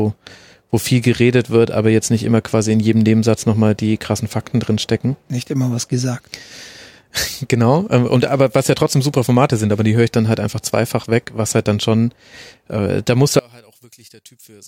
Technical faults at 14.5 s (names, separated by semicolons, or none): one channel inverted